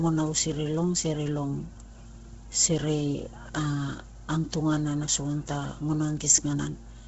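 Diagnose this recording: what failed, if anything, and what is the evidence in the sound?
The fault is at the codec stage, and it runs through the whole speech clip. The sound has nothing above about 7.7 kHz. The upper band has a breathy, grainy texture, and heavy coding damage is audible throughout. The likely cause is Bluetooth LC3 compression at a low rate. The coder drops much of the upper spectrum and fills the gaps with noise. The damage fits a rate near 16 kbps with 10 ms frames.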